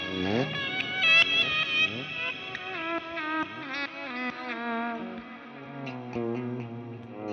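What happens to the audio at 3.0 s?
Nothing goes wrong at 3.0 s; the audio plays through that moment intact, with no dropout, click or other fault.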